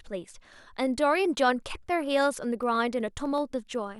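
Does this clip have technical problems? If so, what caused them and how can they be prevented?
Yes. From 2.63 to 3.88 s there are periodic USB or driver dropouts: about ten tiny skips, each far under a millisecond, spaced every 0.125 s. A recurring background task stalls the audio stream, so the speech jumps forward with small ticks. Their strict spacing distinguishes them from random clicks or clipping. To prevent this, disable the interfering background process or power-saving feature and give the audio interface its own USB port with a larger buffer.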